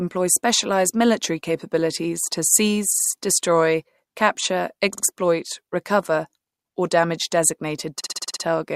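Repeated frames stutter the speech four times. A stretch of compressed data was delivered more than once, so the decoder replays it. At 2.93 s, after "specialized military capabilities to", a 60 ms block plays three extra times. At 4.93 s, after "destroy capture", a 50 ms block repeats twice more. At 6.47 s, before "or damage", a 60 ms block repeats three extra times. At 8.00 s, a 60 ms block loops seven extra times, adding 0.42 s.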